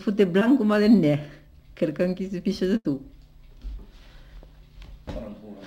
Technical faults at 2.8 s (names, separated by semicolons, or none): burst of packet loss